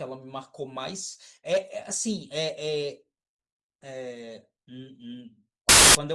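From 5.69 to 5.95 s, file tags are played as audio: the compressed data of an embedded cover picture is decoded as if it were samples. Because that data is essentially random, the result is a quarter-second burst of very loud white noise with abrupt, hard edges.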